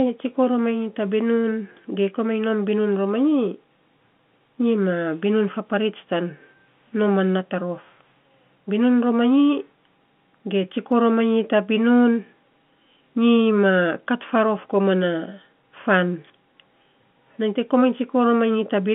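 No technical fault is audible: the speech comes over an ordinary G.711 telephone line, held to a band of roughly 150 Hz to 3.5 kHz, which fits A-law coding at 64 kbps, with no disturbance or dropout anywhere in the signal.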